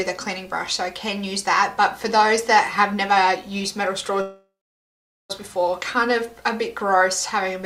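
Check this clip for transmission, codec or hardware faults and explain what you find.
One fault: a call audio freeze from 4.21 to 5.32 s. Delayed packets likely emptied the jitter buffer. The last sound is stretched and fades, then 0.8 s of silence. The sound then resumes where it stopped, 1.08 s late, with nothing lost.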